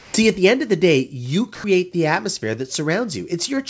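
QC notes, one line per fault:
0.00–0.14 s and 1.55–1.64 s, comfort noise in place of the background: In both pauses, before "at the end of" and between "of the day you" and "the atmosphere that", the ambient bed gives way to a flat, featureless hiss. This is likely discontinuous transmission, with the receiver synthesising shaped noise while the sender is silent. The fill sits about 14 dB below the real background in the opening gap and about 3 dB below it in the second.
0.11–0.14 s, onset clipped by the voice detector: Sound resumes abruptly just before "at the end of". The soft attack is missing and roughly 30 ms of the onset is replaced by the same synthetic hiss. The likely cause is a voice detector that was slow to register the restart, so those first moments were never transmitted. The clipped start is heard against a bandwidth that stops at 8 kHz, which fits a G.722 call path.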